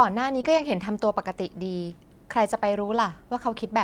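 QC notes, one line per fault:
0.41 to 0.54 s, short concealed packet loss: about 20 ms of audio never arrived in time, and the receiver filled roughly 13 ms of it by carrying the preceding sound forward before blending back into the real signal, adding around 10 ms. It heard as a brief smear or wobble.
0.45 to 0.64 s and 2.84 to 2.98 s, lost packet rebuilt from error correction: in both places packets were lost and replaced by the low-bitrate copies carried in the packets that followed, about 100 ms in the first run and 80 ms in the second. Nothing drops out, but those stretches sound rougher and noisier. A spectrogram shows grainier texture across each run. The waveform stays continuous with no gap.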